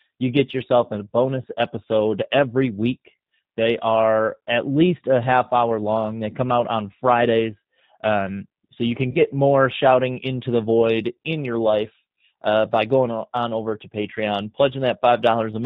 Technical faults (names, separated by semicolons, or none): G.729 codec; VoIP packet loss concealed by the speech codec